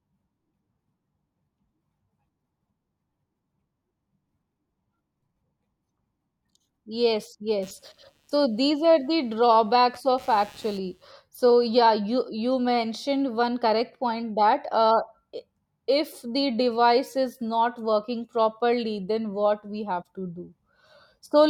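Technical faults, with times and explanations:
7.62 to 11.12 s, computer activity noise: a buzzy chirping pulsing at around 150 Hz, roughly 30 dB below the speech, as processor or graphics load shifts the shared ground. Unlike steady mains hum, its rate isn't 50 or 60 Hz, and it starts and stops independently of the speech.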